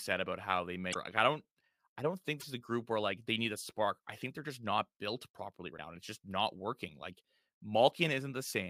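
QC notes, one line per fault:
0.90–0.96 s, 2.37–2.44 s and 5.74–5.79 s, damaged data in a compressed stream: three short glitches, each about 50 to 70 ms, after "about how they", between "don't I don't think" and "is a group where", and between "just not built properly" and "and it's just not". Corrupted bytes made the decoder misread frames and lose sync until it found the next valid frame header.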